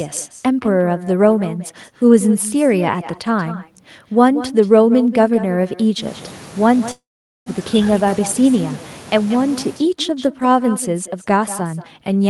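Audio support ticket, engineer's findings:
Echo with no canceller, throughout: every phrase trailed around a fifth of a second later by a thinner copy about 15 dB down. Far-end loudspeaker feeding its microphone, no echo cancellation, our signal returned over the network round trip.

Call audio freeze, 6.91–7.49 s: last sound held as a fading buzz or hiss, then about 440 ms of silence, resuming where it stopped with nothing lost. Likely delayed packets emptying the jitter buffer, which inserted a 548 ms gap.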